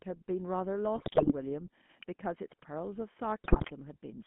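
The whole clip has passed through a GSM full-rate codec, whose sound points to the original 13 kbps mobile coder. It models the vocal tract as a filter and excites it with sparse, regularly spaced pulses, throwing away most of the fine excitation detail. Together with a line band of roughly 150 Hz to 3.4 kHz, the speech is thin and muffled, with a plainly audible buzzy, gravelly roughness laid over it.

From 0.95 to 1.33 s come GSM bit errors. Corrupted bits, at a rate of around 4%, reached the decoder and garbled the filter, pitch and gain parameters it uses to rebuild each frame. Across a run of frames that points to roughly eighteen 20 ms blocks, the spectrum warps and the level jumps, so the speech breaks up into squawks, pops and a gargling texture.

At 2.03 s there is a sharp snap sitting on top of the speech, an electrical switching spike. It is most likely an arc from a nearby switch, motor or static discharge that was induced into the audio line. 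It is very brief, a tight, hard click that has nothing to do with the speech itself.

From 3.44 to 3.72 s the GSM bit errors return, this time at a higher error rate of about 5.6%. Over a stretch that fits about thirteen frames, the decoder again rebuilds speech from damaged parameters. The result is another burst of warped, squawking, gargled sound with sudden level pops.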